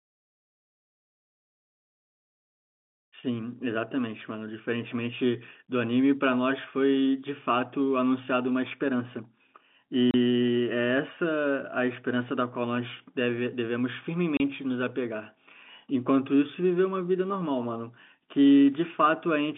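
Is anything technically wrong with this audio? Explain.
Yes: the speech drops out twice with packet loss filled with silence, at 10.11 s and 14.37 s, each a 30 ms hole, which fits a single lost packet replaced by silence. The waveform shows a flat silent gap with abrupt edges; the spectrogram shows a blank vertical stripe, within the telephone-band G.711 audio.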